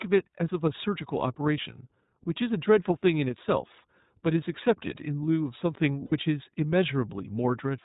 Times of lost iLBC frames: 6.05-6.12

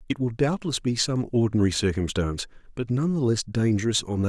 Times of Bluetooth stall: none

